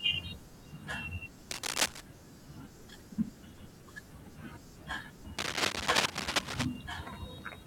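A dense, uneven scratching rustle sits over the speech from 1.50 to 2.01 s at about 5 dB above it, then returns louder, about 10 dB above, from 5.38 to 6.65 s. This cable scratch noise likely comes from a worn cable or connector shifting, its contact resistance jumping rapidly.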